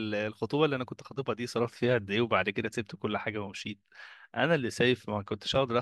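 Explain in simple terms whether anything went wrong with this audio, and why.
No audible technical faults here.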